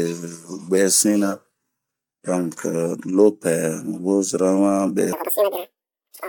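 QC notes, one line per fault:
5.13–6.28 s, section at the wrong speed: speech turns high and hurried, playing at twice its speed with pitch rising sharply, likely from a mismatched playback clock.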